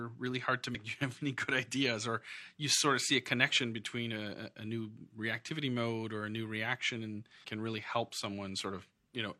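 Speech with two brief glitches from damaged data in a compressed stream, at 0.70–0.75 s and 7.40–7.45 s. Corrupted bytes made the decoder misread those frames and lose sync until it found the next valid frame header.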